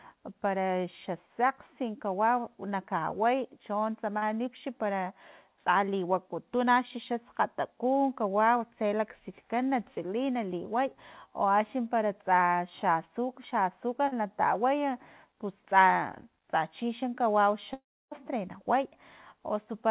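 At 4.18 to 4.24 s and again at 14.08 to 14.14 s there is short concealed packet loss: about 40 ms of audio failed to arrive in time each time. The receiver filled each gap by extending the preceding sound and then blending back, which is heard as a brief smear or wobble in the speech.

From 17.74 to 18.13 s the speech gives way to a fading buzz or hiss continuing the last sound, then about 0.3 s of near-silence before the audio resumes with that stretch missing. This is likely a long network dropout of roughly 0.4 s, covered by concealment until it ran out. All of this sits on top of narrowband audio with nothing above 4 kHz, consistent with G.711 mu-law call coding.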